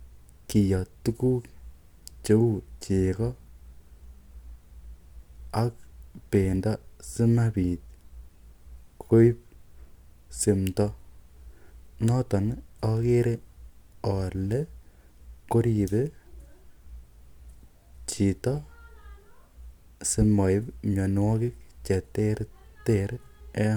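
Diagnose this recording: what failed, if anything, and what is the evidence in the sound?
Nothing failed: no stage shows any audible fault.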